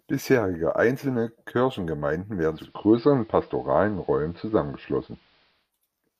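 At 2.44 s the receiver loses its digital stream and shows digital radio blending to analogue, cross-fading over 315 ms to the AM broadcast. Until 5.72 s the speech shifts level by about 2 dB and carries faint hiss.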